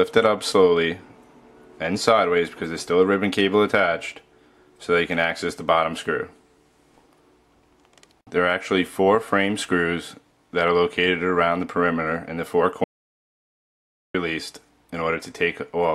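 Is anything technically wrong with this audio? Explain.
Yes. There is an audio dropout to silence from 12.84 to 14.14 s, about 1.3 seconds long. The sound stops abruptly mid-flow and resumes just as abruptly, and the gap holds no room tone at all. That points to the input itself being lost, likely a disconnected device, a failed link or a stray mute, while recording continued and filled the gap with silence. On the waveform it is a flat line. On a spectrogram it is a blank vertical band cut cleanly through all frequencies.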